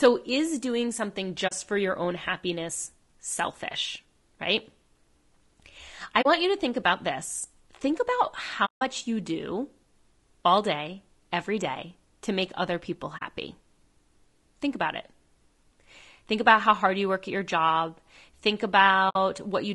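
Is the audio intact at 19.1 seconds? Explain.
No. From 19.09 to 19.16 s there is AAC frame loss with muting: the decoder received nothing for a stretch that fits about three lost frames, so it zeroed them. Overlapping windows fade the sound down and back up, leaving a soft-edged gap.

Across this moment, as throughout, the audio is rough and grainy, with noise between the harmonics and a thin, artificial-sounding top band. The likely cause is low-delay AAC compression (AAC-ELD) at a low bitrate around 32 kbps, whose short frames resolve pitch harmonics poorly.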